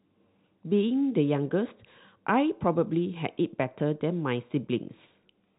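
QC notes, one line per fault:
No faults are heard in this speech clip. It carries the narrow band of G.711 telephone coding, with nothing above about 3.8 kHz.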